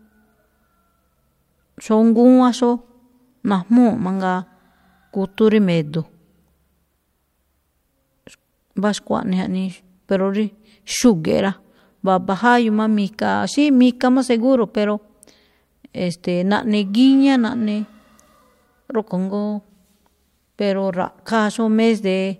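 Nothing goes wrong anywhere in this speech recording; there's no technical fault to point to at any moment.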